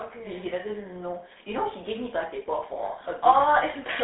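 It's a speech clip squeezed through a GSM full-rate codec all the way through. There's nothing above about 3.9 kHz, the band sits roughly 250 Hz to 3.7 kHz, and the pulse-driven excitation leaves a plainly buzzy, gravelly roughness, which fits the 13 kbps full-rate coder.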